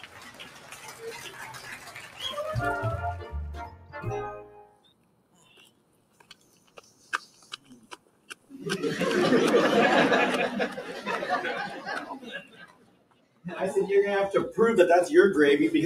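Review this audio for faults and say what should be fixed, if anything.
A speech-oriented noise suppressor is running on this non-speech audio. It treats sustained and ambient content as noise, so the level swings by roughly 20 dB as held sound and decay tails sink while attacks pass, giving a pumping, thinned texture.

Sound cut by the noise suppressor is clearest at 0.00–2.22 s, 3.65–3.98 s, 4.44–7.08 s, 7.35–8.51 s and 12.44–13.44 s. The suppressor pulls these passages down by about 10 dB, and about 11 dB at 3.65 s, relative to the surrounding sound.

Disable or bypass the speech noise suppressor for music and general sound sources.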